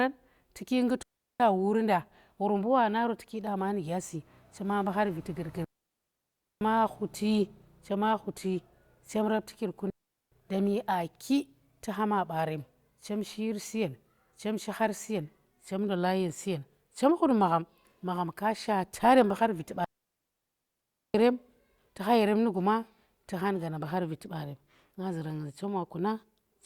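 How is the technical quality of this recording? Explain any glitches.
The speech is interrupted four times by digital wireless dropouts. They occur at 1.03 to 1.40 s, 5.64 to 6.61 s, 9.90 to 10.32 s and 19.84 to 21.14 s. The gaps last 0.37, 0.97, 0.42 and 1.3 s. Each time, the radio link lost too much data. The receiver then muted its output with a very fast fade. You hear clean holes of near silence. No noise bursts surround them.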